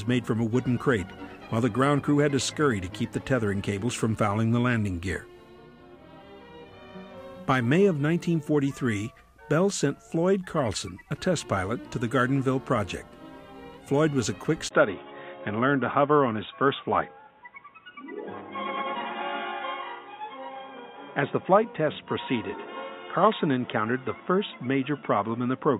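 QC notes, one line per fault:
14.69 to 25.8 s, input switched to a poorer device: after a 20 ms gap the sound turns dull, with nothing above 3.8 kHz and a new noise floor well below the signal, at about the same level. The brief gap and changed background point to a likely device change rather than a simple filter.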